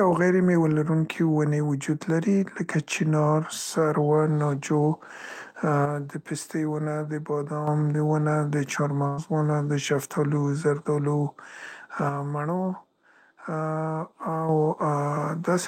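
One channel drops out from 5.85 to 7.67 s and again from 12.09 to 14.49 s: the level falls abruptly by about 6 dB, likely because one stereo side went missing before the mono sum. A burst of packet loss at 9.07 to 9.19 s leaves about 100 ms of audio missing; the gap is filled by a decaying continuation of the last sound before the speech jumps ahead.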